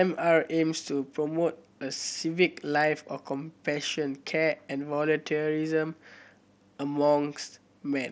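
Nothing stood out as a fault on listening to this speech, which comes through the band-limited sound of a Bluetooth mSBC headset link.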